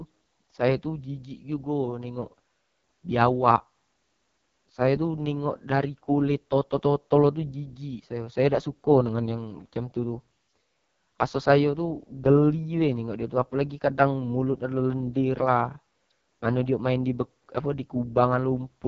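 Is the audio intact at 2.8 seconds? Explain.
No. At 2.8 seconds the speech carries the AMR wideband (HD Voice) codec damage that runs through the whole clip. It sounds rough and raspy. The rasp fits the lowest 6.6 kbit/s mode, where too few pulses reach the vocal tract model. Nothing is heard above 7.6 kHz.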